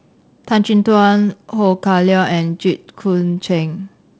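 Nothing in this speech clip points to a technical fault. It carries the sound of G.722 wideband telephone coding at 48 kbit/s, which keeps the band up to about 7 kHz but adds a light hiss above 4 kHz and a little extra noise in the lower band at this reduced bitrate.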